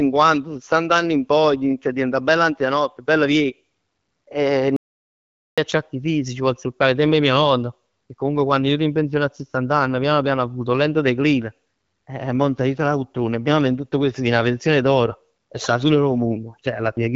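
At 4.76 s the speech cuts out in mid-flow and stays silent until 5.58 s, an audio dropout to silence lasting about 0.81 s, with no room tone at all, most likely from the input being lost while silence was written. The waveform shows a flat line; the spectrogram shows an empty vertical band, beside the HD Voice band limit near 7 kHz.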